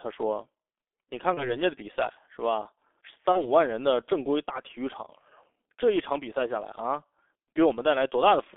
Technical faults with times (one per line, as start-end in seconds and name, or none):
0.00-8.56 G.723.1 codec
1.34-1.56 VoIP packet loss concealed by the speech codec
3.32-3.47 VoIP packet loss concealed by the speech codec